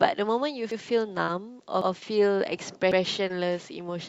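Speech clip carried over a call path whose Opus coding limits the top end to about 8 kHz, at a quality consistent with a 64 kbps stream. Overlapping chunks cause a stutter at 0.71, 1.81 and 2.91 s, where about 100 ms of audio replays at each join of 1 s processing chunks. Short concealed packet loss appears at 1.25 to 1.30 s and 3.28 to 3.31 s as brief smears where roughly 20 ms went missing and the decoder extrapolated the preceding sound to fill the gap.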